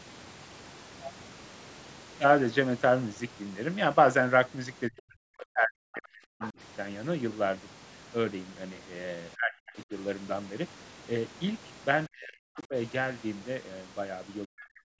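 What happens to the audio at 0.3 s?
At 0.3 s the speech is intact, with no fault, only the normal trimming of the lowest bass and the 8 kHz upper limit of the call microphone processing.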